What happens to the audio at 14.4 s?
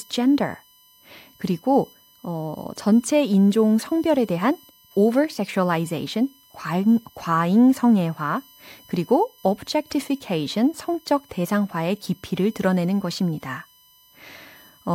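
At 14.4 s the USB whine is still present, as it is throughout the clip: a fixed-pitch tone built on 1 kHz, strongest at its 13 kHz harmonic, roughly 35 dB below the speech, caused by current drawn in 1 ms bus frames leaking through power or ground.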